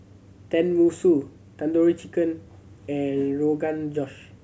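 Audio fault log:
No faults can be heard in this speech recording. There is nothing here to log.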